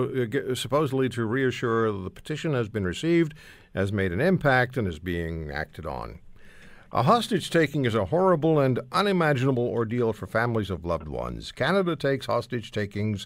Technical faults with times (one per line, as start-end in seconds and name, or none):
none